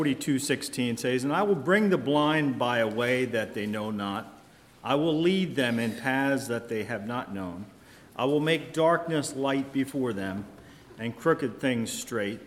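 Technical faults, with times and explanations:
No technical faults detected.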